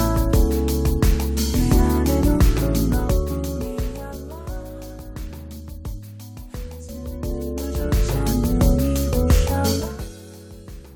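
From 6.92 to 8.24 s, zipper noise rides on the sound. The level moves by roughly 15 dB in coarse, unsmoothed steps, about thirty a second. Each jump leaves a tiny click, so the fade buzzes and ticks.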